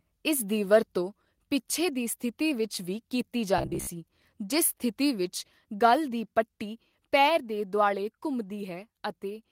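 From 3.58 to 3.88 s the speech becomes a rigid, metallic buzz near 67 Hz: robotic sound, likely from repeating a short buffer, which fits about 15 ms.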